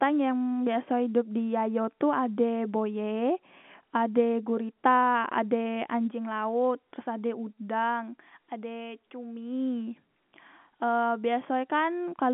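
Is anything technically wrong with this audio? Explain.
No, there's nothing technically wrong with it.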